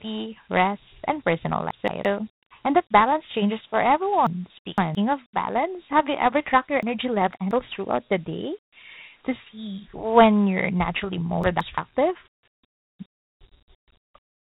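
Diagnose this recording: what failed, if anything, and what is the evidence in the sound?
The codec stage failed: the speech was stored as Dialogic VOX ADPCM. Nothing sounds above about 3.9 kHz, and a gritty hiss tracks the speech, which fits 4-bit samples at 8,000 a second. That grit is what separates it from plain telephone band-limiting.

Storage or buffering scrambled the order: chunks out of order at 1.71–2.05 s, 4.27–4.95 s, 6.83–7.51 s and 11.44–11.78 s. Each 170.67 ms block plays one or three places late, giving jumbled sound. Unlike a dropout, no audio is missing.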